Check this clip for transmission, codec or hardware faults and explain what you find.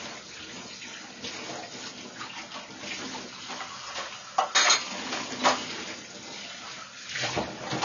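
One codec fault runs through the whole clip. Throughout, nothing sounds above 6.9 kHz, and the audio is dull and smeared with a fizzy warble. Likely AAC compression, at a rate that fits about 24 kbps, which cut the top band and starved the rest.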